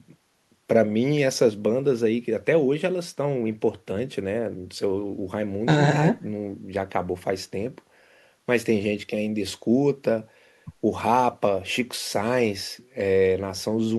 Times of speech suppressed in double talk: none

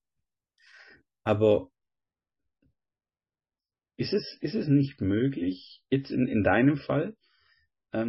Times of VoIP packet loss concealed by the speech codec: none

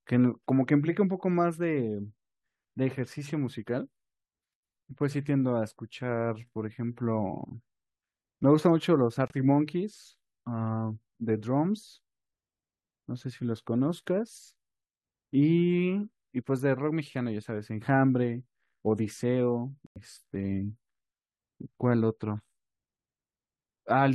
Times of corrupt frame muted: 9.28-9.32, 19.87-19.98

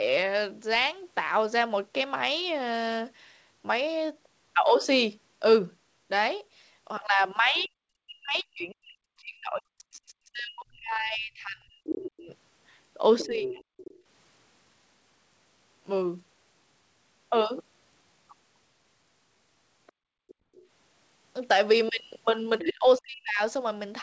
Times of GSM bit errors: none

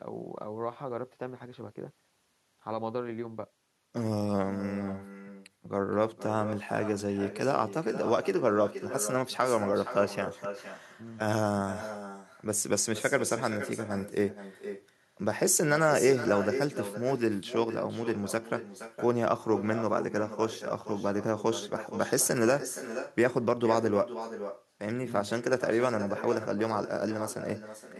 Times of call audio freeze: none

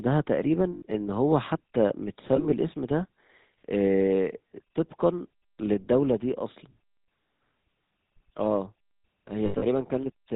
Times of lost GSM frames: 0.74-0.82, 2.36-2.54, 7.04-7.08, 9.46-9.65

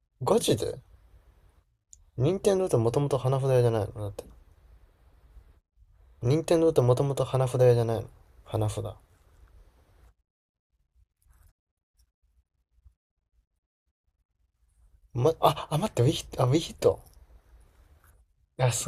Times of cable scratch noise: none

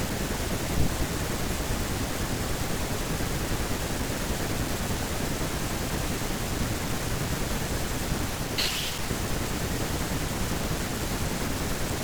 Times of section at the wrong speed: none

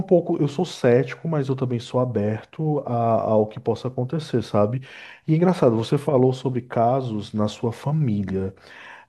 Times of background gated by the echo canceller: none

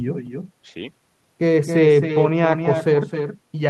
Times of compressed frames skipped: none

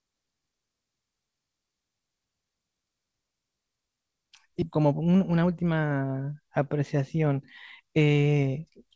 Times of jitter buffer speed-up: 4.78-5.90

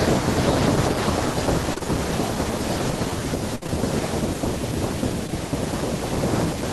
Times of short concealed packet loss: 1.74-1.86, 3.63-3.81, 5.27-5.31

